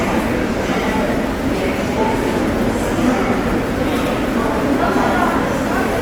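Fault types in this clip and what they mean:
Opus compression: tones throughout sound grainy and rough, likely Opus music mode near 24 kbps; the spectrogram stays filled to 20.1 kHz, speckled, not holed.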